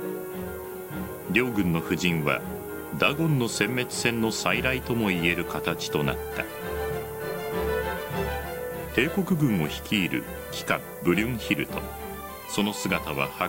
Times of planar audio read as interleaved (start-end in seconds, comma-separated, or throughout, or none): none